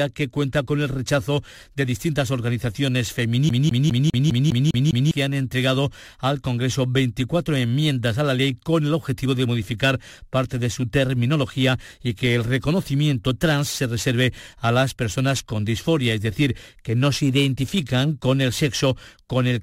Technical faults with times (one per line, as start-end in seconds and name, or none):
3.49-5.11 CD stuck on one turn